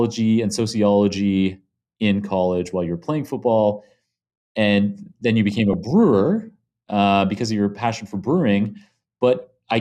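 Weak DAB reception let bit errors, around 0.2 percent, slip into the MP2 data, putting short blips of noise in single sub-bands: DAB burbling at 2.66 to 2.71 s after "and sociology in" and 5.52 to 5.91 s after "and then you".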